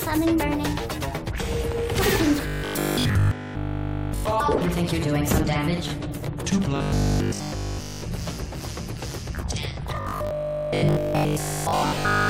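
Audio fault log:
2.47–4.25 s, 6.76–8.02 s, 9.97–12.29 s: robotic sound from repeated short buffers. The audio turns into a rigid, metallic buzz pitched at 50 Hz that only loosely follows the underlying sound. The likely cause is input arriving too slowly, so playback repeats the last 20 ms block to fill the gaps, which fixes the period at 50 Hz. Nearly all of the first two stretches is repeated material. In the final stretch, most of it is.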